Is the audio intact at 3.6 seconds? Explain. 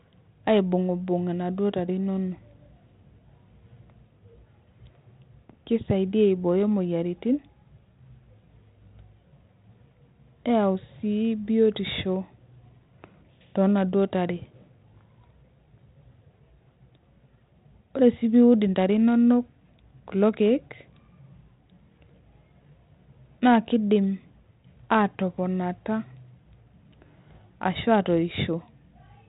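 Yes, the audio is intact at 3.6 seconds, with no dropout, glitch or other fault at that moment.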